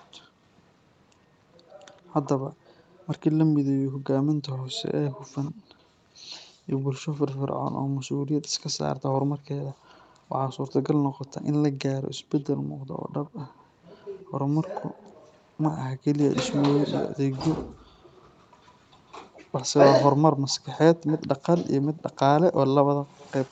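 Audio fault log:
0.24 to 23.5 s, echo leak: A faint delayed copy of the speech trails it by about 110 ms, roughly 25 dB below the direct sound. The likely cause is a far-end loudspeaker whose echo canceller let some of its own playback return.
0.28 to 8.18 s, 12.6 to 12.87 s, 17.65 to 17.99 s, 22.97 to 23.17 s, background gated by the echo canceller: The room sound suddenly dips, then returns. The drops reach about 37, 12, 40 and 40 dB. The first span totals roughly a second of dips. The canceller is clamping the microphone while playback runs.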